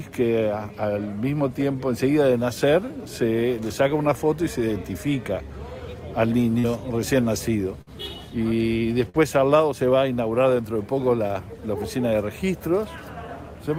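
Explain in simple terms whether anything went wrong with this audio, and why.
Two kinds of fault can be heard. The first is short concealed packet loss, at 6.59 to 6.65 s and at 11.27 to 11.31 s. A tiny piece of the sound arrived too late. The player covered the gap by stretching what came just before. It sounds like a quick smear or wobble.

The second is a burst of packet loss, at 7.81 to 7.89 s and at 9.09 to 9.19 s. Here the gap the player had to fill was longer. The player held the last sound briefly, letting it fade. Then it jumped ahead, so a sliver of the audio is gone.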